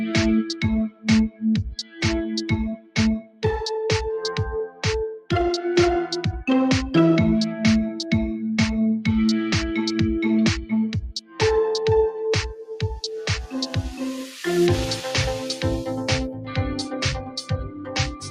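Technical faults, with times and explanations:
Throughout: noise suppressor applied to music or sounds. A speech-oriented suppressor is active on non-speech material, treating sustained tones and ambience as noise. Gain swings by roughly 10 dB as it engages and releases, so held sound and decays pump and thin while transients pass largely intact.
0.89–1.43 s, 1.8–2.02 s, 2.76–3.44 s, 4.68–4.84 s, 11.16–11.41 s, 16.3–18.3 s: sound cut by the noise suppressor. Steady or decaying content is pulled down hard, by about 17 dB at its deepest, and about 11 dB at 4.68 s. The first five dips last roughly 150 to 500 milliseconds each, with the last running to the end of the clip.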